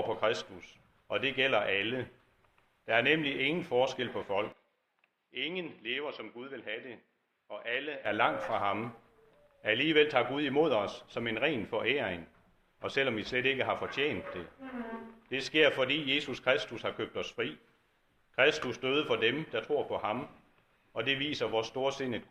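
From 4.52 to 8.06 s, the recording likely switched its input to a poorer device, another microphone or a headset in call mode, and then switched back. Across that stretch nothing reaches above 5.5 kHz, so the sound turns dull and boxy. It also drops by roughly 10 dB and picks up a faint background noise of its own, far below the signal. The change happens instantly, with no gap at either switch.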